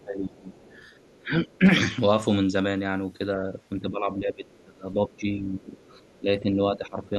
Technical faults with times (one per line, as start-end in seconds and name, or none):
0.00-0.55 speech suppressed in double talk
0.47-1.18 other side's voice leaking through
1.18-1.65 speech suppressed in double talk
3.82-5.72 speech suppressed in double talk
4.48-4.62 other side's voice leaking through
5.79-6.19 other side's voice leaking through
6.20-7.14 speech suppressed in double talk